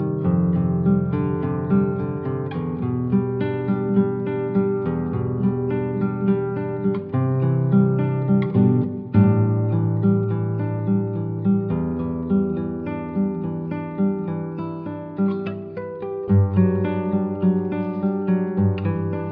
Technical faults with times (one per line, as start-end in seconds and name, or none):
none